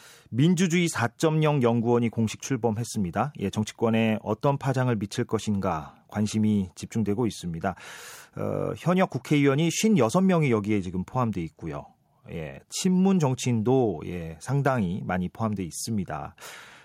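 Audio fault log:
No faults are heard anywhere in the speech. There is nothing here to log.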